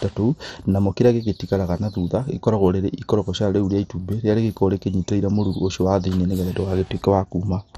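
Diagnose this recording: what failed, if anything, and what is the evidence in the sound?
Codec stage, throughout: nothing above 14 kHz, flickering upper bands and a gurgling, granular roughness. This is likely heavy MP2 compression, not a clean low-pass filter.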